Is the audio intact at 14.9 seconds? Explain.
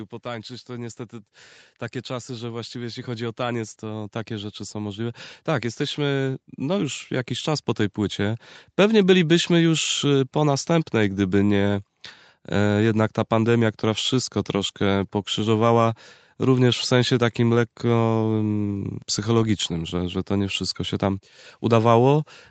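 Yes, the speech at 14.9 seconds is intact, with nothing wrong at that moment.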